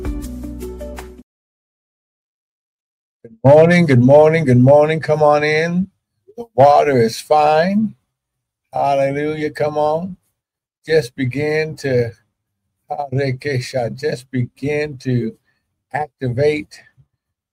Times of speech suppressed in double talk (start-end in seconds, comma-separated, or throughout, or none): none